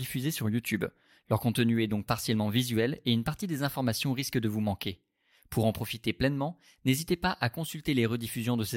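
No technical faults can be heard at any point in the speech.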